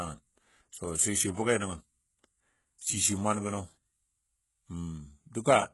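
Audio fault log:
Throughout: HE-AAC compression, likely, at heavy strength and a very low bitrate of around 12 kbps. The sibilants and the upper band of the speech sound gritty and metallic, with a lisping edge on s sounds, because the treble is not coded but copied up from the lower spectrum and shaped with a rough envelope. On a spectrogram the upper bands look like smeared, repeated copies of the lower harmonics that fail to line up, and nothing shows above 11.5 kHz.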